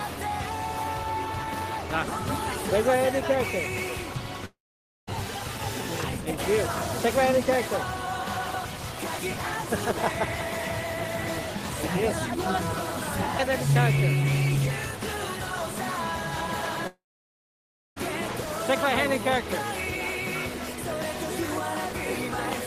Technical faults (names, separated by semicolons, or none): long network dropout